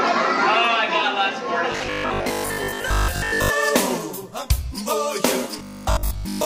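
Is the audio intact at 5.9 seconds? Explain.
No. From 5.59 to 6.45 s the audio is likely starved of new data, so the same 20 ms buffer is replayed over and over. The result is robotic sound from repeated short buffers: most of the sound becomes a rigid, metallic 50 Hz buzz.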